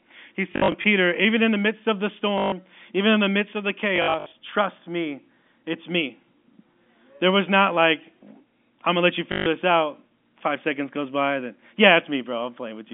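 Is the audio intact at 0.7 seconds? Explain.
No. From 0.52 to 0.84 s, just before "even in the midst", there is packet loss with the last packet repeated. About 160 ms goes missing in scattered gaps, with the longest run 60 ms, which fits eight lost 20 ms packets. Each gap is filled by replaying the previous packet, so the runs buzz near 50 Hz as a brief robotic stutter.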